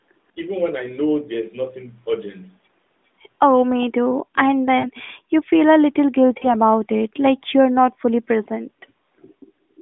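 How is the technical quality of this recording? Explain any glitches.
Narrowband phone-call speech, band-limited to roughly 200 Hz to 3.6 kHz by the AMR narrowband mobile codec, with light coding texture consistent with its 12.2 kbps mode. Two glitches stand out.

At 4.80 to 4.88 s and 6.38 to 6.47 s, the voice is briefly drawn out and fades: lost AMR speech frames, about 40 ms each, where the decoder filled the gaps by repeating earlier voice parameters at reduced gain.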